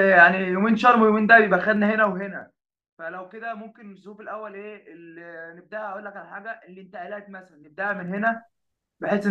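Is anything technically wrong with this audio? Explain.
Yes. Zipper noise occurs from 1.67 to 2.88 s as the level drops by roughly 20 dB, and from 7.43 to 8.55 s as it rises back. The gain moves in unsmoothed 2 dB steps about ten times a second, so each jump clicks, producing an audible ticking over the speech.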